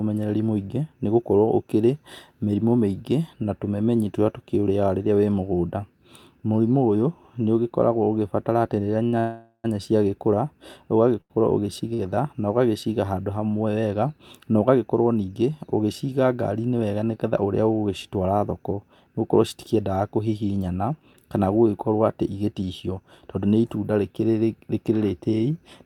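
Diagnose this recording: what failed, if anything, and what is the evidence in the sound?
Sounds are briefly held and drawn out, with a faint buzz or dip, at 9.03–9.07 s and 9.07–9.14 s just after "ũgĩbatara atĩ rĩrĩa", at 11.21–11.32 s, and at 11.94–12.01 s just before "na ũgagĩciga handũ hamwe". These are short stalls from a late packet at the network stage: the jitter buffer emptied, so the receiver stretched the last sound by 17 to 89 ms, then resumed without loss.

From 9.20 to 9.66 s the speech stops and is replaced by a fading buzz or hiss that dies to about 80 ms of silence, then picks up exactly where it left off. This is a call audio freeze. The likely cause is packets held up in the network, leaving the jitter buffer empty for about 0.44 s and inserting a gap.

Between 22.44 and 23.46 s the speech runs hurried, at 109% speed with unchanged pitch. This is a jitter buffer speed-up. 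The receiver had built up surplus delay and trimmed pitch-period-sized slices, about a tenth of a second in total, to catch up.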